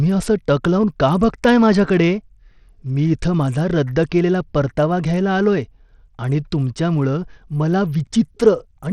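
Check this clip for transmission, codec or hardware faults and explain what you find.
One codec fault runs through the whole speech clip. The top end flickers and drops out, with gritty noise riding on the sound. This is likely Bluetooth SBC compression, starved of bits at what sounds like about 80 kbps.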